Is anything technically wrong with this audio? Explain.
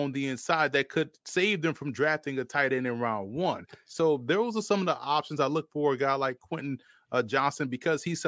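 No, nothing technically wrong can be heard in this speech recording; the signal holds steady throughout.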